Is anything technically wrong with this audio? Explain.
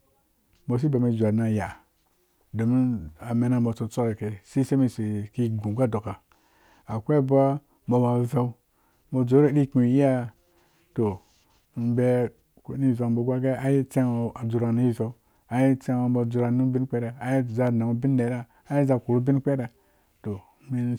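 Yes. At 17.67 s, just before "nanghu bin nera", a sharp snap sits on top of the speech, peaking around -20 dBFS. This is an electrical switching spike, likely from a nearby switch, motor or static discharge arcing briefly, with the audio line picking up that burst of interference.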